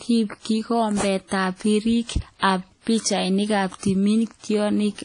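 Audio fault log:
Throughout: low-bitrate audio saved at a high bitrate. The speech sounds dull, with nothing at all above about 10.1 kHz and the artefacts of an earlier low-bitrate encoding that a generous encoding would not leave. The likely cause is that the sound was first squeezed through a low-bitrate codec, which fits something like WMA at 32 kbit/s, then re-encoded as a much larger MP3. The second pass kept the earlier damage and could not restore the missing top end.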